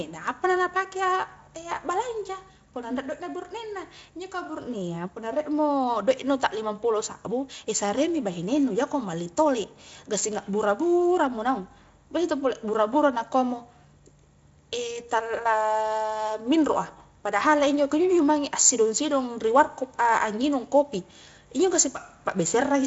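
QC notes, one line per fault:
Nothing to log here: the speech sits comfortably in its Speex encoding, with the top end tapering off around 7.6 kHz, as that setup would have it.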